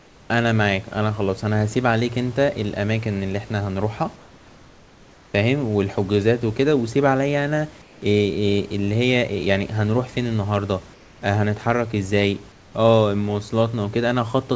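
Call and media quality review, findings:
Comfort noise in place of the background at 0.00–0.30, 4.16–5.34, 7.82–8.02, 10.94–11.22 and 12.52–12.74 s. Likely discontinuous transmission: sender stops in silence, receiver synthesizes noise. Room background becomes flat, featureless hiss, about 3–4 dB quieter, until speech resumes.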